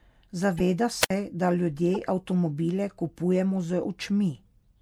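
A speech clip with two kinds of fault. A wireless microphone squelch dropout at 1.01 to 1.1 s brings hiss, then about 63 ms of muted silence before "da ljudje avtomobile kupujemo" returns. The radio signal faded and the receiver's squelch cut the output. Corrupt frames were decoded at 0.58 to 0.61 s, hitting about three frames, and at 1.94 to 1.97 s, between "da ljudje" and "avtomobile kupujemo". Damaged bits put energy at the wrong frequencies, heard as short bursts.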